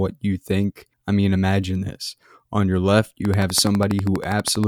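From 3.25 to 4.65 s a train of clicks, about twenty regular pops at 12.3 per second, rides loudly over the speech, likely from interference.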